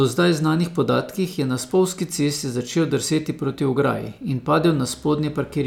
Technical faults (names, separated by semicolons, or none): none